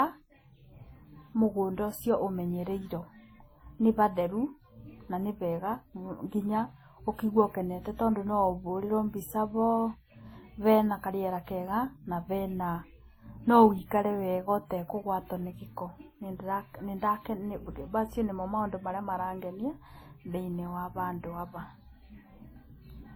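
Throughout the speech, two different kinds of compression smear are heard layered together, with nothing above 20.1 kHz. This is likely transcoding between lossy codecs: a low-rate WMA encode, around 32 kbit/s, re-encoded as Opus, whose bits partly go on preserving the earlier damage.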